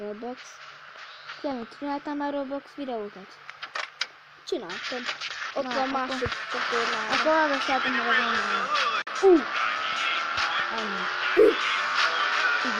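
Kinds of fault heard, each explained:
Digital broadcast dropout: at 9.02 s the receiver briefly mutes with a quick 8 ms fade, losing about 43 ms of sound, which fits one bad frame.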